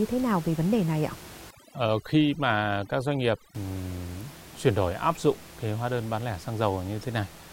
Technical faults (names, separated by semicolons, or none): overdone noise removal